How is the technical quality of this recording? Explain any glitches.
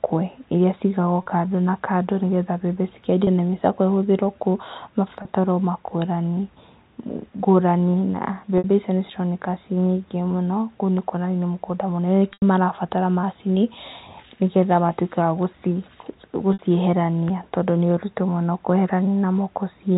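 The speech carries six brief dropouts, bridged by packet loss with pitch repetition, heard over telephone-band audio consistent with G.711 A-law coding.

At 1.23, 3.24 and 5.22 s about 30 ms goes missing; at 8.58 and 16.53 s about 60 ms; at 12.33 s about 90 ms, which fits packets of 30 ms each. The receiver fills each hole by looping the last pitch cycle, so the shorter gaps sound like a momentarily held, buzzy tone. The 90 ms loss fades toward silence before speech cross-fades back. A plain dropout would leave a click or a dead hole instead of this brief, buzzy tone.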